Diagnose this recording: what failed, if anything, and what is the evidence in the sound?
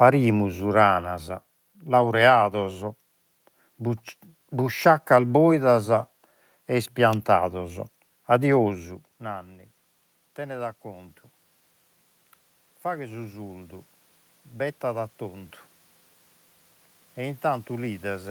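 Automatic gain rising, from 7.53 to 11.22 s and from 12.83 to 15.58 s, in call processing. The gain control judged the input too quiet and ramped up by about 4 dB, then about 5 dB, so voice and room noise swell together.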